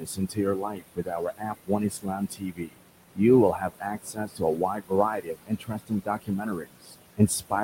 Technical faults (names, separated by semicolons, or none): noise suppressor artifacts; speech cut by the noise suppressor